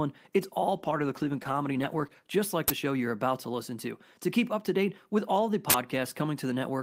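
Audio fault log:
0.77–2.21 s, call bitrate drop: the bandwidth estimate fell and the encoder dropped from 32 to 14 kbps, so the speech turns coarse and muffled until "just like".
2.68–2.70 s and 5.70–5.74 s, uninitialised buffer: 20 ms and 40 ms blocks played before audio was written, so leftover memory comes out as a loud crack or burst of digital noise, after "just like" and "date with all the".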